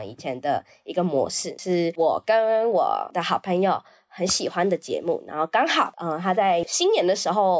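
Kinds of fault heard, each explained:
No technical faults can be heard anywhere in this recording.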